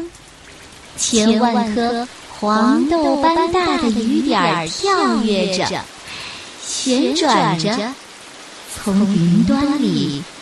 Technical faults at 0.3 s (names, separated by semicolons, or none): doubled audio track